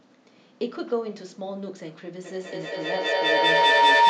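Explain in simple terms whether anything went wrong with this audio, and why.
Something did go wrong. From about 2.25 seconds until the clip ends, a loud, high-pitched whistle rises over the speech, pulsing roughly five times a second and growing louder than the talker. This is feedback howl. Two devices on the same call were in one room, so sound from a loudspeaker went back into a microphone and round again, getting louder each time. The loop settled on one tone, near 1 kHz, and kept it ringing.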